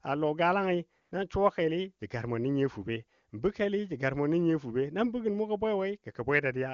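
At 1.01 s there's a short burst of AMR comfort noise, lasting about 100 ms until 1.11 s. The phone decided the talker had gone quiet and stopped sending speech frames for that stretch, so the far end patched the gap with synthetic noise built from a rough sketch of the background's level and spectrum. You hear the real room tone swap out for a smooth, even hiss that switches in and back out. The wideband codec carrying the speech sounds clean, which fits its top 23.85 kbit/s mode.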